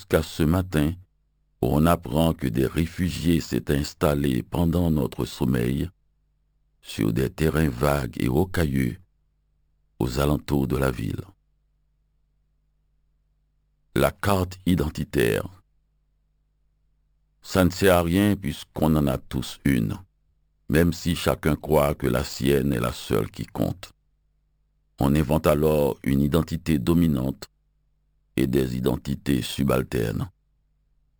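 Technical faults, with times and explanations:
throughout, imaging from sample-and-hold upsampling: metallic fizz at 6 to 12 kHz, about 21 dB down, mirrored by unsmoothed repeated samples, suggesting a 12 kHz source rate.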